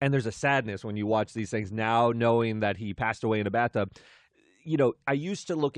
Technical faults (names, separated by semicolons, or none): periodic USB or driver dropouts